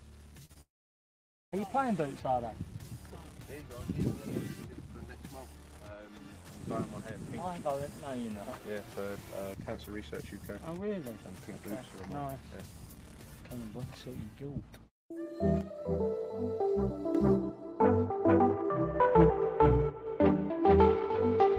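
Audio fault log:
0.45–0.51 s and 0.53–0.57 s, short concealed packet loss: about 40 ms and then 20 ms of audio failed to arrive in time, and the receiver bridged each gap by extending the preceding sound before blending back into the real signal. The result is a brief smear or wobble, not a gap. The sound never goes silent, and nothing is audibly skipped beyond a few hundredths of a second. That is what separates these from a true dropout.
0.61–1.54 s, long network dropout: almost a second of audio goes missing, most likely because the connection stalled. The receiver first stretches the last sound into a fading buzz or hiss, but that cannot be sustained, so roughly 0.85 s of the span is silent. Playback then resumes further along, with the lost section gone rather than delayed. The length and the silence distinguish it from the short concealed losses just before it.
15.61–17.15 s, one channel drops out: for about 1.5 s the level drops abruptly by about 6 dB and then returns, which points to one stereo channel likely being lost before the mono fold-down. 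Material shared by both channels stays present at half amplitude, and anything carried only in the missing channel vanishes. Timing and content carry on unbroken, which distinguishes this from a network dropout, where the audio itself goes missing.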